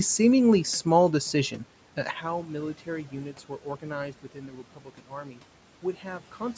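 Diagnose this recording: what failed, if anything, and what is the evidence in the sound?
Sudden gain jump at 2.11 s: speech and room noise drop together by about 12 dB and stay down, likely a digital gain or bit-shift change applied without a ramp.

Speech cut by the noise suppressor between 4.23 and 5.39 s: in call processing, the suppressor treated stretches of speech as noise, pulling roughly 0.7 s of speech down by as much as about 12 dB.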